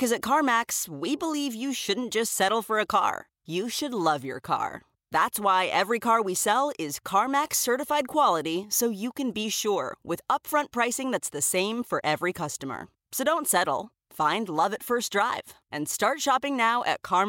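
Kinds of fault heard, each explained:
No kinds of fault are heard in this speech clip.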